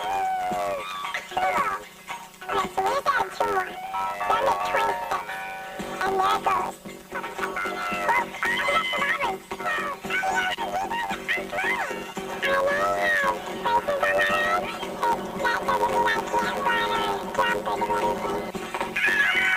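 From start to finish, the audio carries a planar-read-as-interleaved fault. Each stereo block stores all left samples and then all right samples, but playback treats them as alternating left-right pairs. So each block plays twice at double speed, left half then right half. The blocks are short, about 10.67 ms, which fits a 512-sample block. That produces a robotic buzz repeating at 93.8 Hz. There is no clear octave shift.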